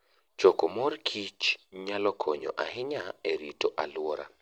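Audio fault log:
0.13–4.40 s, clock slip clicks: a fast, even rattle of around 150 tiny ticks, one about every 30 ms, likely from two unsynchronised clocks drifting roughly 700 ppm apart, so one sample drops or repeats. A spectrogram shows evenly spaced faint vertical lines, and the waveform shows single-sample steps.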